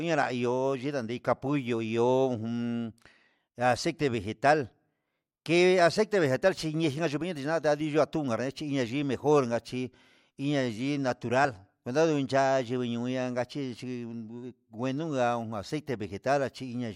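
At 11.44 s the speech jumps forward by around 20 ms as compressed frames are skipped. What sounds like a single codec frame, consistent with a frame length near 24 ms, was never decoded.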